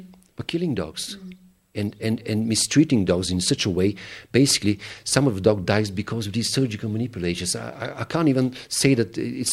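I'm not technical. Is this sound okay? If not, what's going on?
Yes, nothing in this audio points to a technical problem with the signal.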